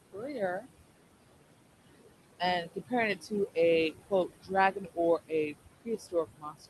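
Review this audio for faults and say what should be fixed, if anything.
Noise suppressor artifacts: the suppressor pulls down every band it judges to be steady noise by about 20 dB, frame by frame, so the room noise, sitting only about 11 dB under the speech, dips in the pauses and swells under the speech. Prevention: use a gentler suppression depth or reduce the room noise at the microphone so the suppressor has less to remove.

Speech cut by the noise suppressor: the suppressor mistook parts of the speech for noise and attenuated them along with the background, at 0.13 to 0.67 s (about 16 dB), 1.31 to 1.57 s (about 22 dB), 2.24 to 3.57 s (about 19 dB) and from 3.91 s to the end (about 21 dB), making soft consonants and endings sound swallowed. Prevention: raise the suppressor's speech-presence sensitivity or slow its gain changes so quiet speech is not classed as noise.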